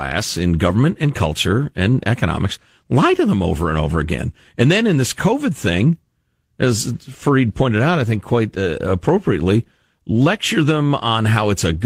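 No technical faults can be heard anywhere in this recording of speech.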